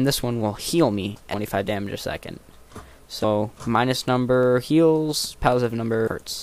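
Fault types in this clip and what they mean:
compressed frames skipped: The audio jumps ahead at 1.33 s, 3.23 s and 6.07 s, losing roughly 200 ms at the first and about 150 ms at each of the others. These are whole codec frames of about 23 ms that were missing or rejected, with a blip or click at each join.
dropped samples: A single sharp click sounds at 4.43 s, far too short to remove any audible sound. The likely cause is a handful of samples, around 0.1 ms' worth, missing from the stream, so the waveform jumps straight to a later value.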